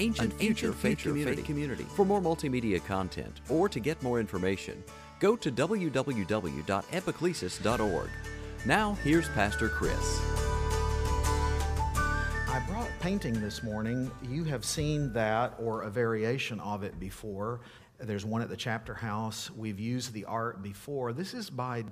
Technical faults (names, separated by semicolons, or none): doubled audio track